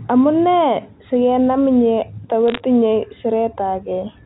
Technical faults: bit errors on a digital phone line

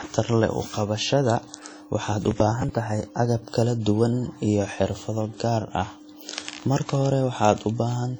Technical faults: WMA compression; processor overload crackle

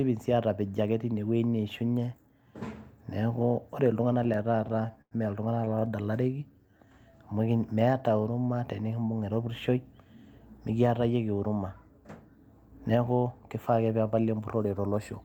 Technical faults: repeated stalls (stutter); jitter buffer slow-down; jitter buffer speed-up

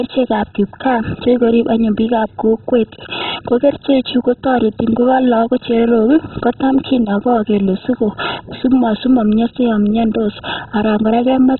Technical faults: MP2 compression

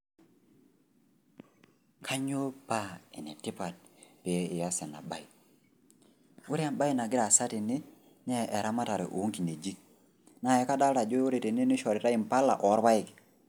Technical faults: none

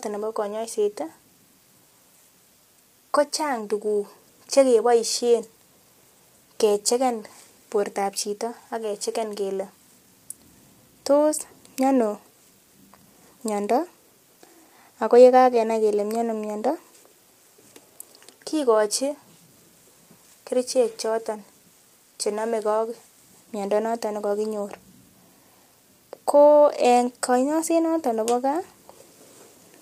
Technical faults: low-delay AAC compression

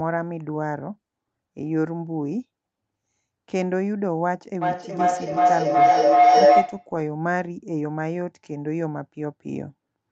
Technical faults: feedback howl

